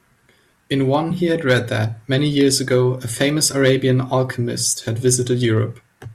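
Crackle and harsh fuzz break out on the loudest speech at 0.94 s, 1.49–1.57 s, 2.16–2.75 s, 3.21–3.90 s and 5.08–5.58 s. This is hard clipping. Peaks driven past the limit by about 1, 5, 2, 5 and 3 dB are cut flat, adding high harmonics.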